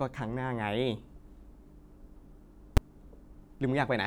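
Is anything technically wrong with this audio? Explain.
Yes. Invalid numbers at full scale occur at 2.77 s in this speech clip. A calculation in the processing chain produced infinite or invalid values, and the output clamped them to the largest value it could represent, holding the signal pinned at one extreme value, far beyond the speech peaks, for about 5.8 ms, which fits a 256-sample processing block. The block is too short for a gap to register, so it comes across as a single sharp, very loud bang.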